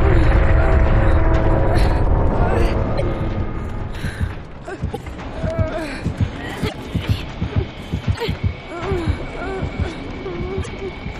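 Five short glitches turn up at 2.97–3.02, 4.93–4.98, 6.68–6.75, 8.14–8.21 and 10.62–10.68 s, each a chirp, burst of noise or short hole with the audio skipping ahead. That's most likely a broken MP3 bit reservoir. Chunks of the stream went missing, so the following frames reached back for borrowed data that wasn't there and decoded junk. Each hit lasts 55–70 ms, roughly two or three 26.1 ms frames' worth.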